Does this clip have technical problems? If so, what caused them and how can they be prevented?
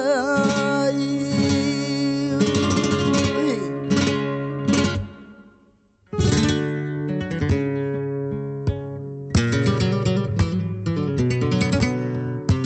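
No, this clip has no technical problems, so there is nothing to prevent.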